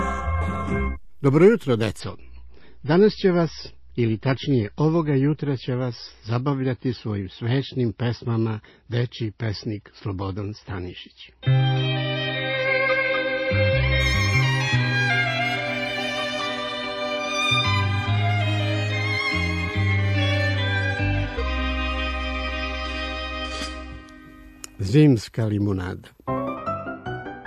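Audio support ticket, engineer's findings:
Adaptive stream at a lower bitrate, 2.00 to 14.00 s. Player switched to a lower-bitrate rendition for 12 s after a throughput dip, then stepped back up. The sound points to MP3 falling from around 128 kbit/s to roughly 24 kbit/s. Treble cut abruptly, nothing above 5.8 kHz. Dull, smeared audio with swirly codec artefacts. The changes at both ends are instant, with no gap or dropout. Probable component: ABR logic or the network path.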